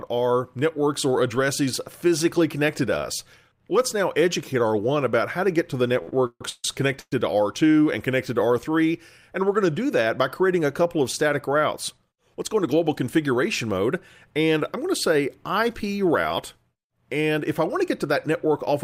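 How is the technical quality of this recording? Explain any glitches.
The recording has clear network-related glitches: a stuttering stretch and a brief freeze just after 6 seconds, and two passages that run fast near the end.

Between 6.02 and 6.65 s there are repeated stalls (stutter). Packets kept arriving late, so the jitter buffer emptied four separate times. Each time the receiver stretched the last sound to cover the wait, filling 364 ms in total. The longest hold was 144 ms, and 58% of that span was concealed. Nothing is lost, but the audio drags and hiccups. A spectrogram shows smeared, frozen bands repeating in short blocks. The waveform shows repeated, too-regular segments.

From 7.00 to 7.13 s there is a call audio freeze. The sound hangs for 120 ms, sustaining the previous sound as a fading buzz or hiss that drops to silence for its last 40 ms. The audio then resumes where it stopped, sitting about 120 ms later than before. 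The likely cause is packets held up in transit that briefly drained the buffer. On a spectrogram this appears as a horizontally stretched band ending in a dark strip.

The jitter buffer speed-up occurs twice. From 11.76 to 13.02 s the audio plays at 108% speed, and from 17.35 to 18.84 s at 104%. The receiver, holding excess buffered audio, trimmed tiny pitch-period pieces over and over to cut the delay. The first passage loses about a tenth of a second and the second roughly 70 ms. Pitch stays the same, but the pace of the first passage sounds hurried. A spectrogram shows harmonics at their usual spacing, with events packed closer together in time.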